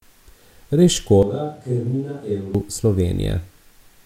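It's a speech clip, and from 1.23 to 2.55 s it jumps to a distant microphone: suddenly roomy, thin, about 10 dB quieter, with room noise about 35 dB down, likely because the close mic dropped out.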